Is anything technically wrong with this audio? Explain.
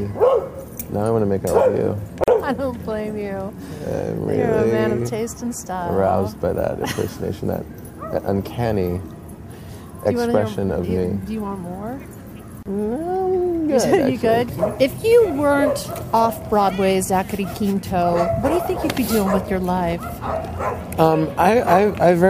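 Yes. There are two gaps at joins of encoded pieces, at 2.24 to 2.28 s (41 ms) and 12.63 to 12.66 s (31 ms). Separately encoded segments were joined untrimmed, leaving encoder delay and padding as brief, smeared silences before the sound resumes.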